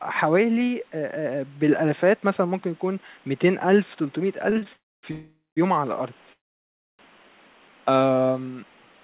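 Late packets left the jitter buffer empty three times in this speech recording, at 4.50, 4.58 and 4.63 s. Each time the receiver held the last sound for 20 to 32 ms until the data arrived, so short stalls stretch a sound briefly, with a slight buzz or dip but nothing lost. Packets were then likely held up in transit for longer, producing a call audio freeze at 4.73–5.05 s, 5.11–5.59 s and 6.33–7.01 s. Each one starts as a continuation of the last sound, a buzz or hiss that fades into silence lasting 260, 230 and 650 ms, and playback then resumes where it stopped. This inserts gaps of roughly 0.3, 0.46 and 0.66 s into the speech without dropping any of it. All of this sits over faint room noise about 34 dB below the speech, carried on a G.711 A-law call path with nothing above 4 kHz.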